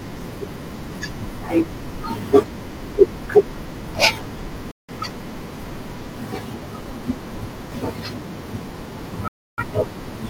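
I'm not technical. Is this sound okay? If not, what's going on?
No. The speech has two digital broadcast dropouts, at 4.71 to 4.93 s and 9.28 to 9.63 s. The receiver lost clean data, muted almost instantly, then resumed when good frames returned. Whatever was said during those gaps is gone.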